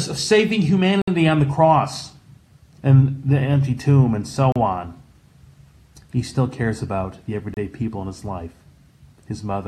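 Three brief dropouts cut the audio to silence. The first runs from 1.02 to 1.08 s, a gap of 59 ms. The second falls at 4.52 to 4.56 s, lasting 36 ms. The third sits at 7.54 to 7.57 s, about 29 ms. Each is a clean hole, and the sound then carries on. The likely cause is a Bluetooth stall. Radio interference delayed packets, the headphones' buffer emptied, and playback waited for the resent data.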